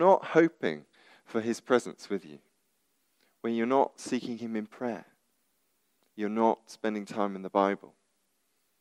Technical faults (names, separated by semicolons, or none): none